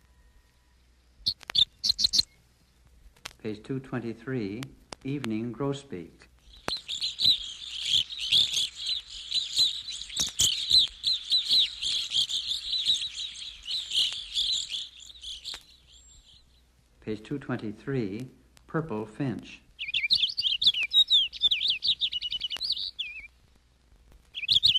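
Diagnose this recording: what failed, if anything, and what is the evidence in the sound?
A processing-stage filter is being restarted on every block from about 21.2 s to the end at 24.8 s: its internal state is discarded and each block starts from silence. Every block edge then carries a small transient. These transients repeat at 25 per second, which points to blocks about 40 ms long, and they are heard as a low 25 Hz buzz or ticking that rises and falls with the level of the sound.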